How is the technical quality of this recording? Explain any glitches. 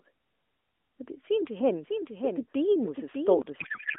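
The recording has two glitches over a narrowband phone line that passes roughly 250 Hz to 3.5 kHz.

From 1.60 s to 3.42 s, the speech is heard twice: a second, slightly weaker copy trails the original by roughly seven-tenths of a second, sitting about 5 dB lower. This is a doubled audio track. The copy is full-band and dry, with no reverberant tail or room colouring, and it cuts in and out abruptly. It is likely caused by the same signal reaching the mix a second time through a slower route.

From 3.60 s to the end, the speech collapses into garbled, warbling noise that barely tracks the talker. This is a codec payload misread. The AMR frames were packed in octet-aligned form but decoded as bandwidth-efficient, so the decoder pulls its parameters from the wrong bit positions. Every frame still looks valid, so playback continues, but it produces nonsense rather than silence.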